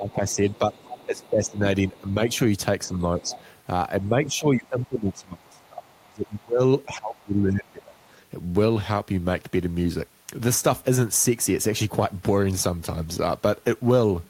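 From 0.0 to 3.3 s the talker's speech dips by roughly 15 dB in patches, likely speech suppressed in double talk, as the echo canceller ducks both sides together. Beneath it, from 0.31 to 2.3 s and again at 3.26 to 3.42 s, a faint second voice about 20 dB down is the other side's voice leaking through, likely echo the canceller left in. From 4.09 to 7.95 s the suppression deepens to around 25 dB and covers about three seconds in total, while quieter leakage returns at 4.8 to 6.43 s and 7.17 to 8.05 s, roughly 30 to 35 dB below the speech.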